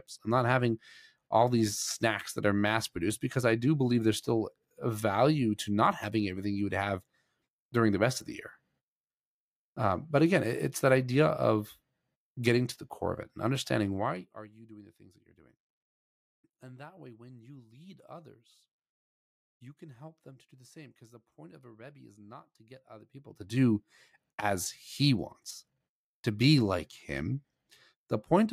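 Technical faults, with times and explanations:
13.93–14.50 s and 23.01–23.61 s, zipper noise: a fast ticking rides the level, first dropping about 20 dB after "core of it and", then rising about 20 dB after "is not to get", because the gain moves in unsmoothed steps roughly a hundred times per second.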